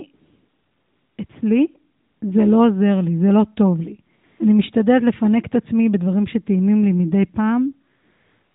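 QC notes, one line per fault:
0.14–1.18 s, 1.26–1.30 s, 2.00–2.22 s, 4.16–4.24 s, 4.26–4.40 s and 7.96 s to the end: AMR comfort noise. In each gap the sender judged the line silent and stopped sending speech frames, so the receiver filled the pause with synthetic noise built from a coarse level and spectral outline. The real background gives way to a smooth, steady hiss that switches in and out. On a spectrogram these stretches are flat, evenly textured bands with hard vertical edges. On the waveform they are uniform low-level noise blocks.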